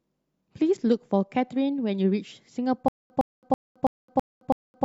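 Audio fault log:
2.88 to 4.84 s, stutter with silent gaps: from 2.88 s to the end of the speech, a short fragment of about 111 ms plays, then drops to digital silence for about 217 ms, and the same fragment returns, six times at a steady 328 ms period. This is likely a stalled player or stream retrying its last buffered fragment each time and then running dry. Whatever audio belonged in that time is missing, and the stutter lasts to the end of the clip.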